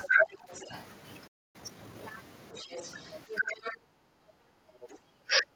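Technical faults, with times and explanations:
0.00–0.83 s and 2.54–3.75 s, other side's voice leaking through: a second voice runs under the talker, loud at first (only about 5 dB below the speech), then fainter (about 15 dB below). The likely cause is loudspeaker sound that the echo canceller failed to remove from the microphone.
0.07–0.25 s, 2.62–2.70 s, 3.38–3.66 s and 4.87–5.54 s, speech suppressed in double talk: the talker's voice dips while the other side is also talking. The dips get deeper each time, from about 10 dB to about 15, 25 and finally 30 dB. This is likely the canceller pulling both voices down because it could not tell them apart.
1.27–1.56 s, playback stall: the sound stops mid-flow for 268 ms, then resumes. The player likely ran out of buffered data or its thread was blocked, so the output went silent until it recovered.
1.56–2.08 s, time-compressed catch-up: right after the gap, the audio sounds hurried at 1.5x speed but keeps its normal pitch. 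The player is shortening its backlog by cutting small pieces and cross-fading across the joins.
3.94–4.59 s, background gated by the echo canceller: the room sound sinks by about 18 dB for roughly 0.7 s and then comes back. The canceller clamped the microphone hard while the loudspeaker was active and released it afterwards.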